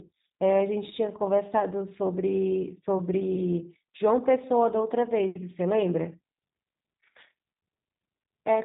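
Throughout, the speech carries plainly audible G.729 codec damage. It sounds consistent with 8 kbit/s G.729A, which rebuilds the voice from a vocal tract filter, a pitch predictor and sparse pulses. Nothing above 4 kHz survives, and the sound is rough and slightly synthetic.

VoIP packet loss concealed by the speech codec occurs at 1.6 s and again from 3.36 to 3.42 s. Each gap fits a single lost 10 ms frame. The decoder fills it by extrapolating the previous pitch and filter, producing a brief, fading smear rather than silence.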